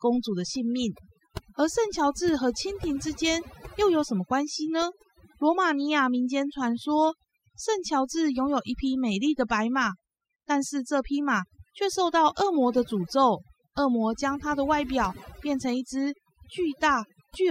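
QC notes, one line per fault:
Throughout, overdone noise removal: the noise reduction is set far too aggressively, pulling individual frequency bands down or out whenever they sit near its noise estimate. The background drops and breaks up into twinkling specks, and the speech loses its quieter components as they vanish.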